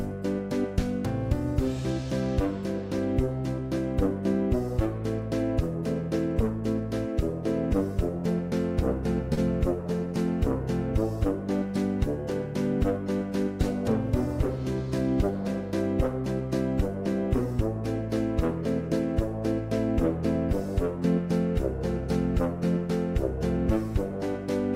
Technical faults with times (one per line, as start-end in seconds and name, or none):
9.33-9.39 short stall from a late packet
12.32 block of digital silence